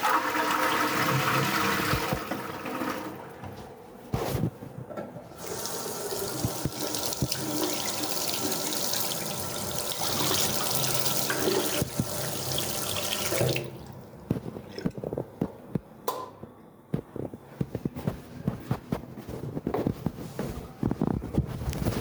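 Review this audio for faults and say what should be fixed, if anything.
Gain pumping runs through the whole clip. The level swings by about 5 dB. The likely cause is input gain set too high, with a fast limiter or compressor clamping each peak. Prevent it by lowering the input gain so the limiter rarely engages.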